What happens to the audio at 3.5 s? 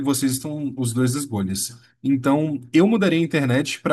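At 3.5 s the speech continues cleanly, with no dropout, click, distortion or other fault.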